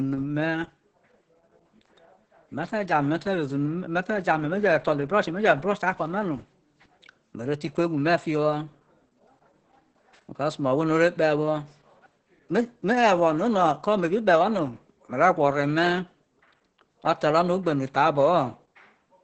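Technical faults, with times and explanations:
Throughout, Opus voice compression: the speech sounds muffled, hoarse and a little robotic, with nothing above about 8.7 kHz. At this bitrate the SILK coder keeps only a wideband slice and quantises the excitation coarsely, which fits a rate around 10 kbps.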